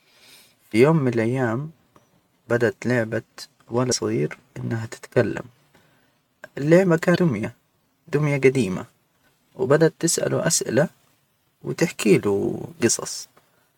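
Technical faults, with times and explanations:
3.88–3.92 s, 7.12–7.17 s and 13.21–13.25 s: damaged data in a compressed stream. Corrupted bytes make the decoder misread frames, lose sync and hunt for the next valid header, so the speech breaks into a brief chirp or blip of roughly 40 to 45 ms each time.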